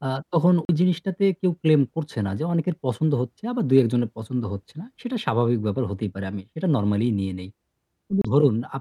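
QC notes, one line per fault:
0.65–0.69 s, Bluetooth stall: speech drops to about 40 ms of silence and resumes, likely because interference delayed packets until the headphone buffer emptied.
8.22–8.25 s, Bluetooth stall: a shorter gap of about 30 ms cuts the speech and playback continues, likely from delayed packets leaving the receiving buffer briefly empty.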